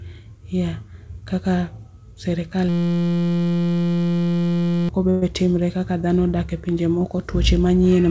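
From 2.69 to 4.89 s a system hang loop repeats one 5.8 ms slice, which fits a 256-sample buffer, as a steady 172 Hz buzz. The spectrogram shows flat harmonic stripes and the waveform shows identical cycles, with about two seconds of speech lost.

At 5.10 to 5.23 s, just before "timre kaka dhno", a call audio freeze, likely from a starved jitter buffer, fills 119 ms with a fading smear. The waveform shows a decaying tail, and the speech resumes 119 ms late with nothing missing. Throughout the clip, the spectrogram has no content above 8 kHz, consistent with G.722 call coding.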